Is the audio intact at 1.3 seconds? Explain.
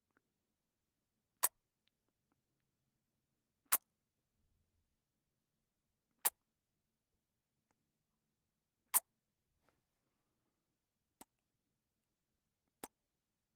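Yes, the sound at 1.3 seconds plays through intact, with no dropout, click or other fault at that moment.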